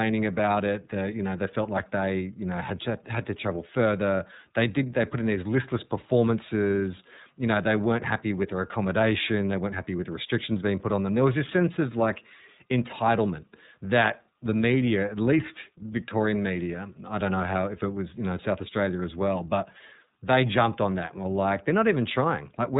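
From start to finish, the speech carries plainly audible iLBC codec damage. Nothing above 3.8 kHz survives, so the sound is narrow and muffled. Each frame is coded independently, leaving a rough, synthetic grain. That grain fits iLBC's 30 ms frames at 13.33 kbps.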